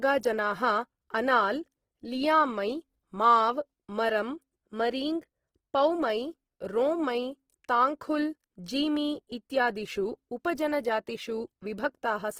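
From start to finish the speech carries plainly audible Opus compression damage, likely from a low-rate music-mode (CELT) encode around 16 kbps. The bandwidth stays full, with content reaching about 20.4 kHz. But there aren't enough bits to code the fine detail of each band, so the encoder keeps each band's overall energy and fills in the gaps with folded or noise-like content. The result is rough, grainy, noisy tone rather than swirly holes.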